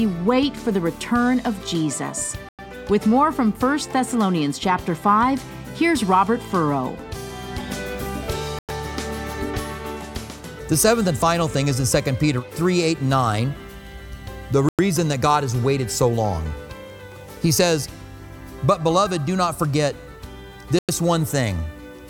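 Gaps between chunks at 2.49, 8.59, 14.69 and 20.79 s: 100 ms silences every 6 s, interrupting the sound at each chunk join.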